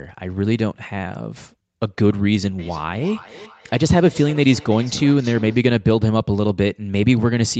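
From 2.59 s to 5.67 s you get feedback echo between two devices: a second device in the room is playing back what this mic sent, and the mic grabs it again. The echo canceller only knows about its own speaker, so the speech comes back every third of a second or so, quieter (about -21 dB at its loudest) and thinner and more ringing each pass, all inside the call's narrow band that tops out around 8 kHz.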